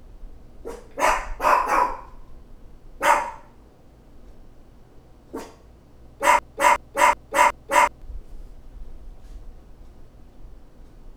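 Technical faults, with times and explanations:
6.39–8.02 s, broken-record loop: one 0.37 s fragment repeats four times back to back, identical each pass, replacing the sound that should have played. A stalled player or stream likely kept resending its last fragment. Unlike an echo, the repeats never fade or overlap.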